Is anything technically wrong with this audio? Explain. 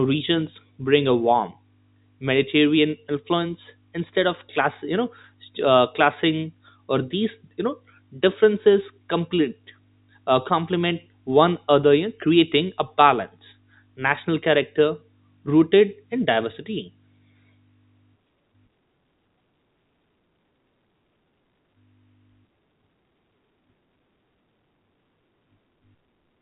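No, nothing in this speech clip points to a technical fault. It has the sound of G.711 telephone coding, with nothing above about 3.8 kHz and a faint background hiss that rises and falls with the level of the speech.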